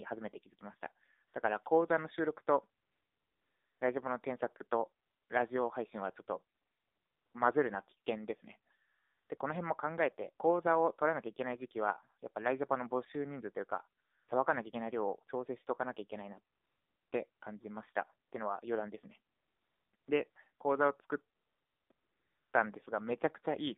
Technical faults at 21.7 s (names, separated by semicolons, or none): AMR narrowband mobile codec; AMR comfort noise